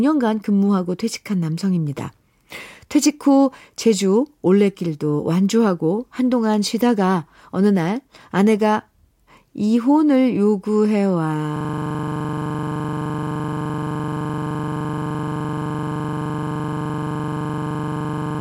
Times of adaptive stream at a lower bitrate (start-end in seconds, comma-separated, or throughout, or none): none